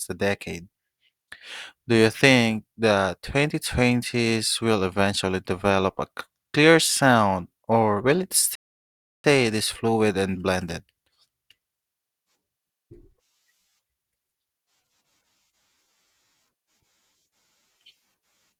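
At 8.55 s, a rebuffering stall: the player ran short of data, leaving 0.69 s of flat waveform and blank spectrogram before "this fluid and blended" resumes intact.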